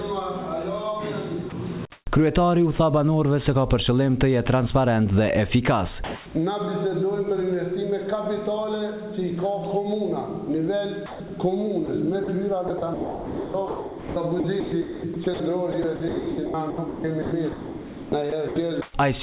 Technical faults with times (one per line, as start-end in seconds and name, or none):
1.50-1.52 sound dropped by the voice detector
1.50-2.06 comfort noise in place of the background
6.04-6.26 comfort noise in place of the background
11.06-11.30 sound chopped by the voice detector
11.86-18.94 sound chopped by the voice detector